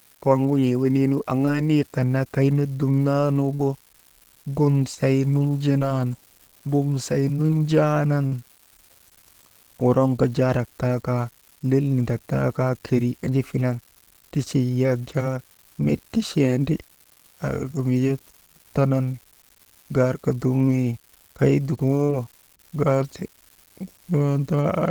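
Unreliable data bit throughout this speech recording: one marginal data line flips its bit in a random share of samples, giving equal-sized spikes heard as a steady crackle that persists through pauses. Short concealed packet loss at 1.45, 3.55, 4.95, 5.79, 7.47, 8.27 and 22.05 s: roughly 20 to 40 ms went missing each time, and the receiver continued the preceding sound before blending back, causing brief smears or wobbles.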